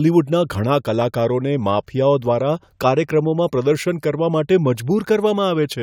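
Nothing in the speech recording points to a technical fault at any point in its duration.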